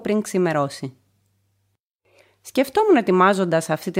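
No technical faults can be heard anywhere in this audio. Nothing in it stands out as a point to mark in time.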